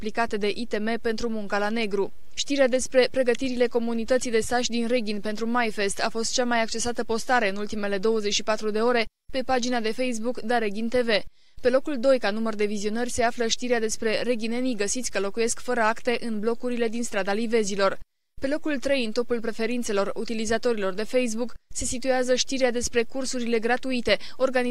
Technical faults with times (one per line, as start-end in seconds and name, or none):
none